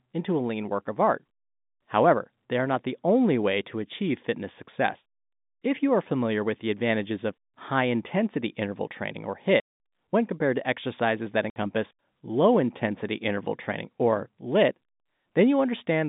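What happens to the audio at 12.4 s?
Nothing goes wrong at 12.4 s; the speech continues intact there, still within the narrow telephone band of the G.711 line, with no break, click or distortion at that point.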